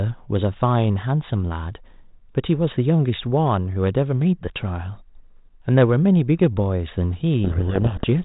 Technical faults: codec payload misread

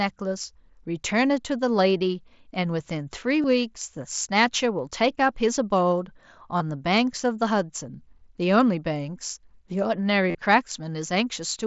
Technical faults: concealed Bluetooth headset packet loss

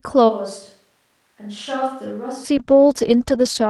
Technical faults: switch to a distant microphone; call bitrate drop

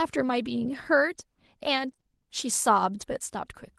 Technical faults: lost packet rebuilt from error correction; short concealed packet loss

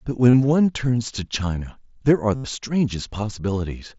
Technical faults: concealed Bluetooth headset packet loss

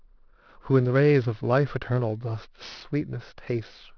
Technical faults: aliasing

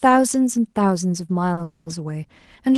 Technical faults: short stall from a late packet; call audio freeze

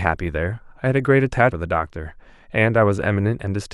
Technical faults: damaged data in a compressed stream

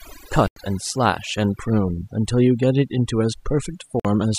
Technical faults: overdone noise removal; Bluetooth stall

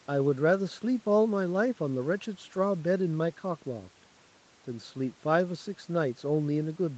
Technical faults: none

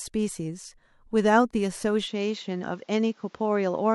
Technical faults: input switched to a poorer device

